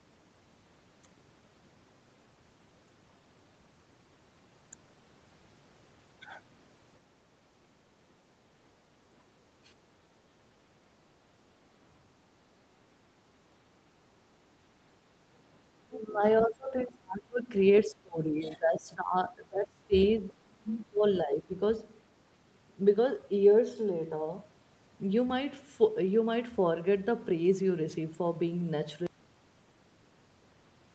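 From 15.81 to 21.55 s, the echo canceller likely could not separate the talker from loudspeaker echo during double talk, so it suppressed speech. The voice sinks by roughly 30 dB at 15.81–16.23 s, 16.41–17.54 s and 20.19–21.04 s, about 20 dB at 17.86–19.94 s, and about 15 dB at 21.23–21.55 s. At 16.40–16.44 s, the other side's voice leaking through, likely as residual echo the canceller missed, adds a brief scrap about 10 dB below the speech. From 29.07 s to the end, an audio dropout to silence, likely from a lost input, cuts the sound to silence with no room tone.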